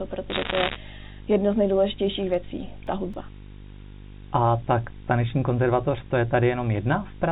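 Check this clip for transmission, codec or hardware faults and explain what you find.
Three faults are present: a display buzz throughout, a burst of line bit errors, and a run of disc scratch ticks, all riding on a G.711 mu-law telephone path whose 4 kHz band limit can be heard.

The video or display buzz runs for the whole clip. A screen or video cable has coupled into the audio chain, injecting interference locked to the picture timing. The result is a 50 Hz field-rate buzz with a layer of hash above it, plus a very high line-rate tone at 15.6 kHz. The interference is fairly strong, roughly 15 dB under the speech, so the buzz sits clearly beneath everything.

Bit errors on a digital phone line appear from 0.30 to 0.76 s. During that half second, bits in the mu-law stream were flipped at a rate of a couple of percent. Each flip corrupts a single sample, and where it lands on the sign bit or a high-order bit it throws that sample far off its true value. 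The speech underneath stays intact, but a dense, gritty crackle of sharp ticks is laid over it.

CD scratch ticks follow between 2.08 and 3.67 s, seven in all. A blemish on the disc destroyed more data than the error correction could rebuild, once per revolution. The player then had to interpolate or mute the damaged samples. These produce evenly spaced clicks and tiny gaps, the longest only a few milliseconds, of uneven strength across that stretch.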